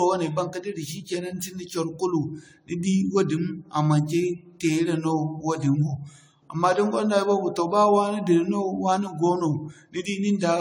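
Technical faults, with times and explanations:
Throughout, generation loss: swirly, hollow, smeared speech with blurred attacks, likely from about seven re-encodes, consistent with a 64 kbit/s AAC-LC chain, each pass adding fresh quantisation noise.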